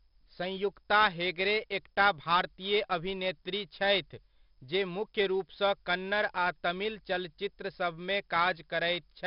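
All the way through, the speech carries 4-bit ADPCM compression: gritty hiss riding every loud syllable, smeared attacks, and nothing above 5.4 kHz, which fits a low-rate stream around 44 kbps.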